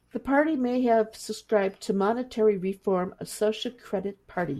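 Speech recording, with nothing technically wrong to point to at any time or from any cause.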